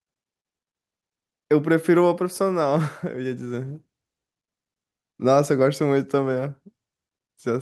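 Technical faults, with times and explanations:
throughout: clock drift between sender and receiver. The sending device's audio clock runs roughly 4 percent faster than the receiver's, so samples arrive a little quicker than they can be played out and the jitter buffer steadily fills. The receiver has to keep discarding audio to stop that backlog growing, so the speech never flows with a steady pulse. Small timing hiccups recur across the whole clip at uneven intervals.
0.11 to 7.27 s: repeated timing corrections. Because the incoming stream runs fast, at 104 percent of the receiver's rate, the receiver keeps cutting short pieces out of the audio to stay in step. Every correction goes the same way, removing material rather than repeating it, but the cuts fall unevenly through this stretch. Each is tiny, so they come through only as slight hiccups and a tempo that wavers.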